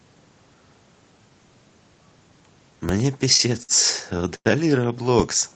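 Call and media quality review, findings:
Low thump at 2.89 s, zero line jumps and then decays, consistent with a roughly 2 Hz high-pass bleeding it off. DC step, probably input offset or converter recalibration.

Speech held and stretched at 3.63–3.72 s (58 ms) and 4.36–4.48 s (94 ms), nothing lost, delay grows each time. Short stall from a late packet, jitter buffer ran dry.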